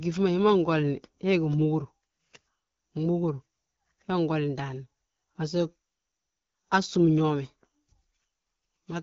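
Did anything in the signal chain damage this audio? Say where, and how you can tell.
No, nothing in the chain has damaged this speech; it sounds like an ordinary HD Voice call carried by the AMR wideband (AMR-WB) codec at 12.65 kbit/s, a rate at which that codec keeps speech clear.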